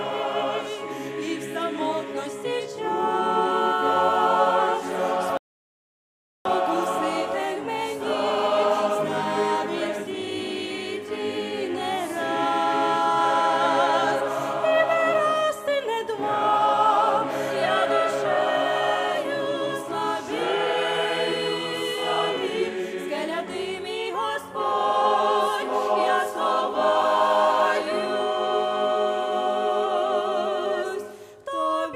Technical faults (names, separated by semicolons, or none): rebuffering stall